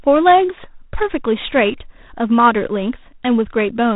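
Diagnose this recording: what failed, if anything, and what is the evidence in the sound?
The fault is at the codec stage: G.726 ADPCM coding runs through the whole speech recording. A rasping, gritty hiss rises and falls with the speech level, and the damage is plainly audible. That roughness fits the 24 kbit/s mode, where each sample carries only a few bits of prediction error. On a spectrogram, energy stops at a hard ceiling near 3.8 kHz, and a grainy noise floor tracks the speech envelope instead of staying constant.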